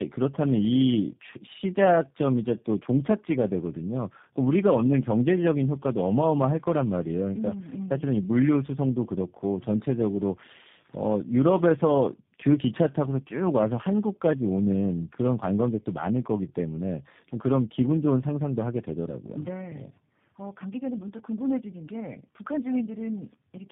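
Throughout, the speech sounds rough, muffled and warbly, with nothing above 3.7 kHz. This is tandem speech coding, consistent with three speech codecs in series, each re-coding already degraded output.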